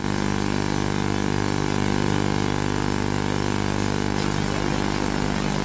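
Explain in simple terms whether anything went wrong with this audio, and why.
One side of the stereo signal arrived 40 milliseconds late, and the two sides were then mixed into a single channel. That is a channel delay (doubling) fault. Because the late copy is as loud as the original, you hear everything twice, like a quick slap echo or a doubled sound, from the very start until about 4.17 s. The call connection it passed through trims off everything above 8 kHz, which is normal for that kind of line.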